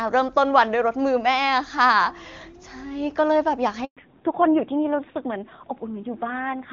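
At 3.85 s the sound stops for a handover gap of 120 ms, lasting until 3.97 s. While the call switched networks, no speech frames arrived. The sound dies away within a few tens of milliseconds and stays silent, and whatever was said in that span is simply missing. A lost-packet dropout would typically be patched with a smeared, buzzy repeat of the previous sound. Here there is true silence, and the audio that returns sounds different from what came before.

That change is the fallback to narrowband, which runs from 3.97 s to the end. Before the switch, the HD Voice wideband path sounds clean with little or no codec damage, consistent with a high rate around 23.85 kbit/s. After it, nothing above 4 kHz remains, and the sound turns duller and rougher, which points to a narrowband codec at around 7.4 kbit/s. A plain low-pass filter would only muffle the sound. This one also adds the grainy coarseness of low-rate speech coding, and it begins exactly where the silence ends.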